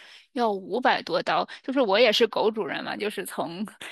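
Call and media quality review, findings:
Channels drifting apart, throughout: inter-channel delay slides on separate device clocks, roughly 30 ppm apart, reaching about a tenth of a millisecond; mono sum gives slowly sweeping comb notches, slow flanging.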